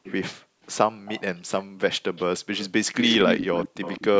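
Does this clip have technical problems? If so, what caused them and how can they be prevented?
Yes. A delayed copy of the speech trails it by 174 ms at 0.03–0.12, 1.06–1.40, 2.16–2.40 and 2.92 s to the end. It sits about 20, 20, 25 and then only 10 dB below the direct sound. This is likely an echo leak: a far end on loudspeaker whose echo canceller let part of the returned signal through. Using a headset there, or a better-tuned echo canceller, would prevent it.

Between 0.42 and 0.63 s the room background drops by up to about 39 dB for about a fifth of a second. This is background gated by the echo canceller, which clamped the microphone while its loudspeaker played. Gentler suppression settings, or comfort noise filling the gap, would prevent it.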